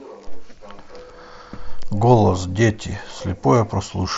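A speech recording with nothing technically wrong, no faults, times or causes to report.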